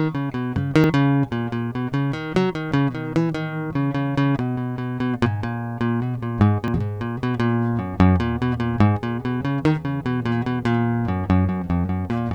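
At 0.84 s and 6.68 s the music jumps ahead by about 40 ms. Each is likely a dropped buffer (overrun): unread samples were overwritten, and the edges were joined.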